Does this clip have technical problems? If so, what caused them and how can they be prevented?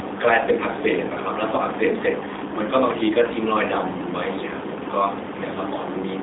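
Yes. The whole clip has G.729 codec damage. The speech is squeezed into roughly 250 Hz to 3.7 kHz, and it sounds rough and a bit synthetic. That happens because the codec rebuilds the voice from a filter model and a few pulses per frame, which fits about 8 kbit/s. To prevent it, record locally or use a wideband codec like Opus instead of a narrowband G.729 call path.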